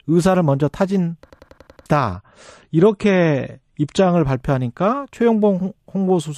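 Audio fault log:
1.30–1.86 s: system hang loop. The playback system stalled while the audio hardware kept replaying the same stretch of its ring buffer, so one slice of about 93 ms repeats exactly six times, a loop rate of 10.8 Hz. At that length the repetition comes across as a rapid machine-gun stutter rather than a buzz, and the sound that should have played meanwhile, roughly half a second, is simply missing. The loop length fits a 4096-sample buffer.
2.13–4.13 s: adaptive stream at a lower bitrate. For two seconds the stream switches to a much leaner version, consistent with a drop from around 128 kbit/s to about 36 kbit/s MP3, as a slower connection forces the player down a tier. Nothing above 10.5 kHz survives, so the speech turns abruptly dull and muffled, with the swirly, smeared artefacts of heavy compression. The switch is instant in both directions and leaves no gap.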